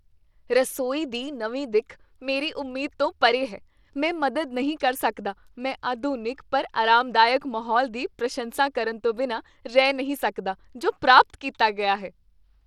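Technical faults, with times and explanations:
Throughout, Bluetooth SBC compression: a likely low bit allocation, fitting roughly 96 kbps, coarsely quantises the speech, leaving plainly audible grit and unsteady treble.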